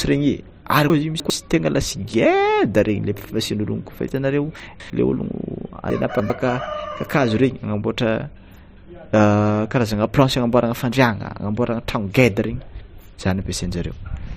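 Chunks out of order at 0.9–1.3 s, just after "regny ary", then at 4.6–4.9 s and 5.9–6.3 s: a 100 ms chunk arrives three, two and three chunks late respectively, so the speech briefly jumbles.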